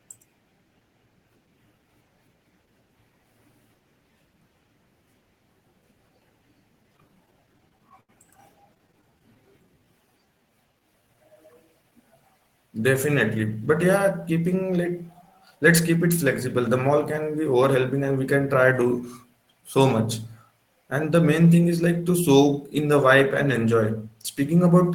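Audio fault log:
6.83–8.11 s and 8.75–9.49 s, repeated stalls (stutter): packets reached the receiver late or more slowly than playback consumed them, so the jitter buffer kept running dry. The first run has 13 gaps, filling 196 ms (about 15% of that stretch), the longest 80 ms; the second has 9 short gaps of at most 12 ms, filling 87 ms (about 12%). The receiver stretched the last sound across each gap, so nothing is lost, but the speech halts and catches repeatedly.
9.11–11.54 s, jitter buffer slow-down: with the buffer running low, the receiver rebuilt its reserve by repeating single pitch periods and slivers of pauses many times over, adding 285 ms in total. Playback runs at 89% speed while the pitch stays where it was, so syllables and gaps are drawn out and the delivery sounds sluggish, overlapping the tail of the second stutter run.
13.35–18.01 s, jitter buffer speed-up: the buffer was holding more audio than its target, so the receiver trimmed it back by cutting out pieces of one or a few pitch periods in quick succession, about a third of a second altogether, ending just before "and we can". 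The speech plays at 107% speed with unchanged pitch, giving it a slightly rushed, hurried quality.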